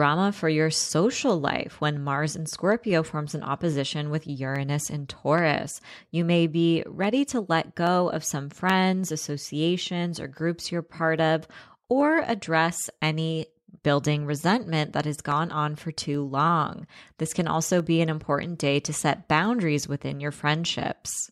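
Clock drift buffer slips run from 0.42 s to 21.11 s in this speech clip: a click recurs every 0.83 s, about thirty in all. This likely comes from two devices on separate clocks, roughly 200 ppm apart, so a handful of samples get dropped or repeated at each slip.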